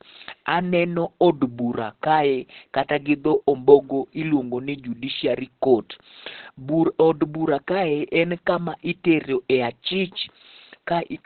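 All the way through, the speech is muffled and hoarse with nothing above 4.3 kHz, heavy damage that's likely Opus compression in its narrowband speech mode at a very low rate.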